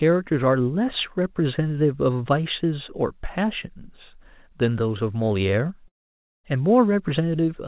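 From 5.88 to 6.46 s, about 0.56 s of speech likely never arrived, a long network dropout. The receiver stretches the last sound into a fading buzz that sinks to near silence. Speech then resumes with the gap missing, still band-limited to 4 kHz as on a G.711 call.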